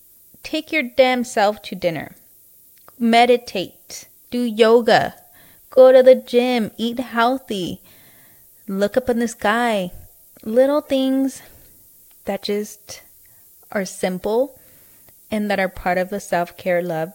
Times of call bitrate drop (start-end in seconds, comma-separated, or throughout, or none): none